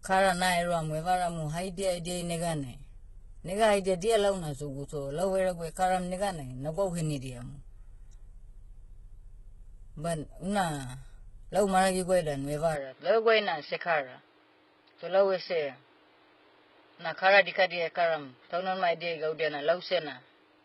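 From the very start the whole recording has heavy HE-AAC compression damage. Nothing survives above about 11.8 kHz, and the treble that is there sounds rebuilt rather than captured. That points to spectral band replication, where the codec copies lower bands upward and shapes them only roughly, so the harmonics don't line up across the crossover. The damage level fits a low bitrate, something like 16 kbps, and the s sounds come out gritty, metallic or lispy rather than clean.

At 12.75 s, with no gap at all, the sound suddenly narrows and stays that way to the end. Everything above about 5.2 kHz disappears, and a new background noise appears, roughly 35 dB below the speech, while the overall level barely moves. The likely cause is the input switching to a poorer device mid-recording, such as another microphone or a headset in call mode, which brings its own narrower band and its own noise.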